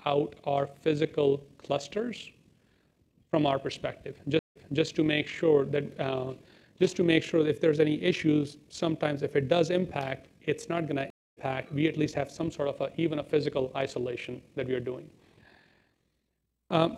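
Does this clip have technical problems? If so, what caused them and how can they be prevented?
Yes. Frames were windowed and overlap-added with a window and hop that don't sum to a constant gain, causing overlap-add ripple throughout. The level swings by about 6 dB roughly 40 times a second, a steady amplitude modulation consistent with a frame hop of about 25 ms. Prevent it by choosing a window and overlap pair that satisfies the constant-overlap-add condition, or by normalising the output by the summed window.

The connection dropped twice, causing a stream reconnect each time. The player went silent and restarted its decoder mid-stream, so the audio fades in afresh. From 4.39 to 4.83 s there is 164 ms of silence, and playback resumes 279 ms earlier, repeating that stretch. From 11.10 to 11.39 s, 266 ms of silence is followed by a jump about 0.2 s later, skipping audio. Prevent it with a more robust network path and a larger client buffer, plus server-side resume that continues at the exact byte position after reconnecting.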